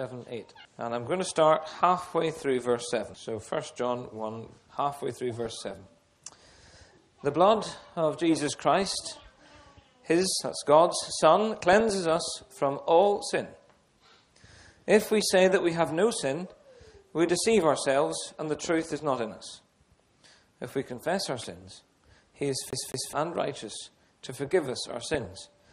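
The whole clip carries a dull, granular sound with a gurgle, plainly audible and most likely caused by MP2 compression at a low rate, around 80 kbps. Layer II divides the spectrum into 32 sub-bands and hands out bits to each. Short of bits, it shuts off the top bands and quantises the rest coarsely. The result is a constant dullness with bands flickering on and off, unlike the sudden bursts of burbling that come and go.

DAB burbling breaks in at 2.37–2.65 s, 5.33–5.98 s, 8.72–9.56 s, 11.55–11.97 s and 21.61–21.81 s. Bit errors at a fraction of a percent have slipped past error correction into the audio frames, so wrong samples put short blips of noise into single sub-bands and wrong scale factors make sub-bands jump in level for up to a frame. The 8.72 s burst is the longest and densest. These bursts are irregular and spectral, which sets them apart from a skip.

From 22.71 to 23.13 s the sound is stuck on one turn like a scratched CD. 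A segment of about 214 ms plays twice, with a brief mute at each jump back. That gives an even, rhythmic stutter of identical material rather than bubbling. DAB burbling returns at 25.14–25.49 s.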